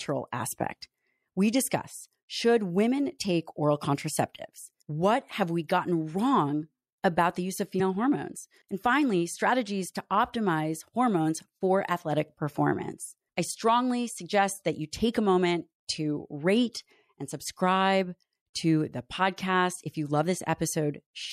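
A speech recording with plainly audible codec damage running through the whole clip. Quiet high-frequency detail drops in and out from moment to moment, giving the sibilants a watery, swirly quality with metallic chirps and smeared consonant attacks. The likely cause is MP3 compression at a low bitrate, something around 64 kbps, where the encoder runs short of bits, discards the treble band and zeroes weak spectral lines frame by frame. From 7.77 to 7.81 s there is a brief glitch in the audio. That is the signature of damaged data in a compressed stream. Corrupted or missing bytes made the decoder misread the frames at that point, lose sync and skip ahead to the next valid frame header, so roughly 40 ms of sound was disrupted.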